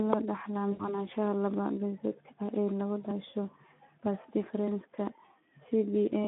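Throughout, the speech carries plainly audible Speex codec damage: a hoarse, noisy texture where the coder runs short of bits for the excitation, which fits a bitrate around 11 kbps. On a spectrogram, energy sits between 200 Hz and 3.6 kHz, with smeared harmonics.

From 0.71 to 1.05 s, just after "loo dhaxlaa", VoIP packet loss concealed by the speech codec takes over. About 80 ms of audio went missing, which fits four 20 ms frames. The decoder repeated its last pitch and filter, so the sound is stretched and fades. On the spectrogram this shows as stretched, fading bands, and the waveform envelope decays and stays weak after the gap.

From 1.54 to 6.25 s, clock drift buffer slips are the likely cause of a few short clicks spaced evenly about 1.57 s apart. Each one points to a jump of roughly 70 samples dropped or repeated, from a clock error around one part per thousand. The waveform shows small discontinuities, and the spectrogram shows thin vertical broadband lines.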